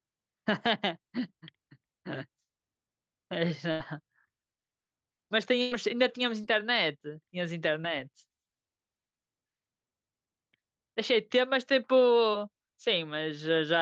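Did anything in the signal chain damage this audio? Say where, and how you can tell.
Yes. At 3.71 to 3.82 s and 5.62 to 5.73 s the speech stretches into a held, fading tail, then jumps ahead: a burst of packet loss on the network, dropping about 80 and 100 ms.

Brief smears or wobbles at 6.41 to 6.45, 7.81 to 7.85, 9.85 to 9.90 and 12.31 to 12.35 s are short concealed packet loss, where the decoder bridged roughly 20 ms holes.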